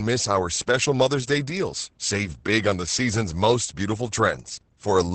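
Opus voice compression runs through the whole clip. The speech is coded by the SILK linear-prediction mode, with nothing above 8.6 kHz, and its excitation is so coarsely quantised that the speech sounds muffled, hoarse and faintly robotic, which fits a bitrate near 10 kbps.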